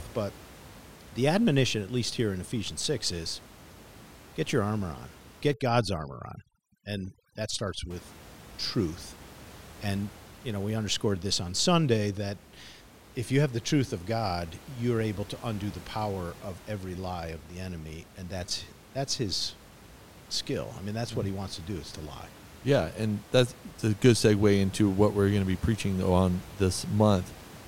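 Speech with room noise about 21 dB below the voice. From 5.54 to 7.91 s, after "get your armor on", overdone noise removal empties bands near the noise floor. The background drops and breaks up into twinkling specks. A gate would instead mute everything at once.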